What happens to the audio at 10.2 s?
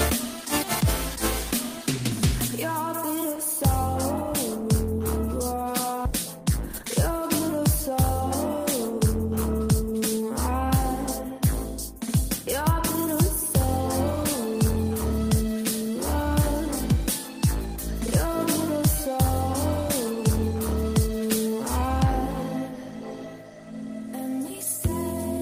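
A jitter buffer speed-up runs from 9.60 s to 10.22 s, ending right at the moment asked about. The receiver's buffer had built up more audio than it targets, as happens when delayed packets arrive in a bunch, so it trimmed short stretches of one or a few pitch periods back to back, around 50 ms in total. Playback runs at 108% of normal speed while pitch stays the same, so the sound comes across briefly hurried before settling at 10.22 s.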